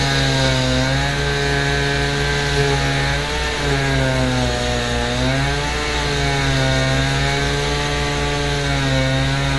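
Sound recording, likely passed through AAC compression at a low bitrate, around 32 kbps, which throws away everything above 11.5 kHz throughout, leaving it dull, smeared and plainly audibly degraded.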